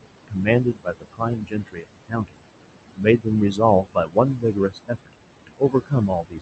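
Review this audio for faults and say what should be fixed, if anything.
The background drops away between phrases and swells under them. These are noise suppressor artifacts: per-band gain pulls the steady room noise, sitting about 11 dB below the speech, down by about 21 dB frame by frame. Easing the suppression depth or improving the microphone's signal-to-noise ratio would keep the residual noise steadier.

Stretches of speech sound swallowed and faint at 0.28–0.47 s, 0.64–2.44 s, 2.95–3.28 s, 3.51–3.60 s, 3.83–4.17 s, 4.35–5.14 s and 5.47 s to the end. This is speech cut by the noise suppressor, which mistook quieter speech for noise and turned it down by up to about 22 dB. The longest loss is roughly a second and a half within the 0.64–2.44 s span. A less aggressive suppressor setting with better speech detection would keep these soft passages from being cut.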